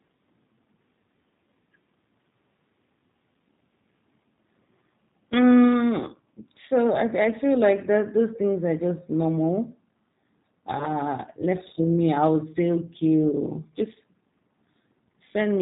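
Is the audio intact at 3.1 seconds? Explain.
No. At 3.1 seconds the speech carries G.729 codec damage, as it does throughout the clip. This low-rate VoIP codec does not store the waveform. It rebuilds each 10 ms frame from a vocal tract filter, a pitch predictor and a few coded pulses, at a rate that fits 8 kbit/s. Nothing above 4 kHz survives. The speech sounds dull and plainly rough, with a buzzy, synthetic edge.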